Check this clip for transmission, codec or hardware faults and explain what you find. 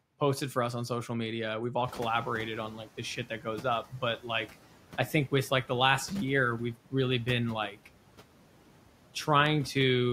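Two faults here, both from the noise suppressor, neither from transmission or hardware.

Noise suppressor artifacts run through the whole clip. The suppressor pulls down whatever bands it reckons are steady noise, frame by frame, by about 12 dB here. So the background dips in the gaps between words and comes back up underneath the speech.

The noise suppressor catching up happens from 1.84 to 2.86 s. Around 2 s the room noise jumps by about 17 dB. The suppressor's estimate of the noise floor doesn't move straight away, so that louder noise comes through with less reduction. It then takes about 1.02 s to settle, finally trimming it by about 9 dB just before "the shit". What you hear is a swell of background that fades back down over that second. The room noise itself is just the mic's surroundings, sitting about 19 dB under the speech after the rise.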